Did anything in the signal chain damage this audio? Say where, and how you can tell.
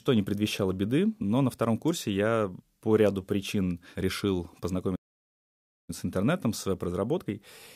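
Yes, at the playback stage: a playback stall from 4.95 s to 5.90 s. The player most likely ran short of buffered data or had its output thread held up, so nothing reached the output for about 0.93 s. You can hear the speech cut off abruptly mid-flow right after "по ряду причин решил", leaving a dead gap rather than a natural pause, before it resumes with "с интернетом с".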